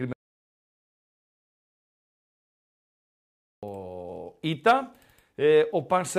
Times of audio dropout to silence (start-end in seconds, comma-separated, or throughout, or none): 0.13-3.63